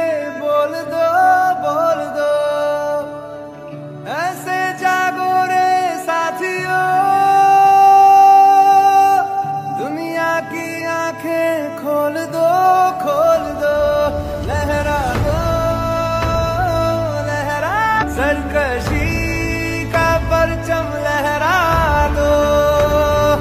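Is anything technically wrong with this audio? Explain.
Yes. At 17.98 to 18.04 s there is a stream segment skipped: the sound jumps abruptly forward, with a short blip at the join, and a stretch of the programme is simply absent. The likely cause is a segment of the stream that failed to arrive, so the player carried on with the next one. On a waveform this shows as a hard discontinuity where the envelope changes without transition. A spectrogram shows a thin vertical broadband line at the splice, with the patterns on either side not lining up.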